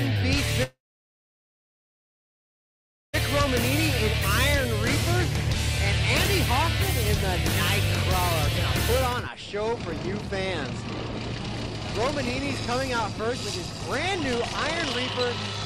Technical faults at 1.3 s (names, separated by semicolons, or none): long network dropout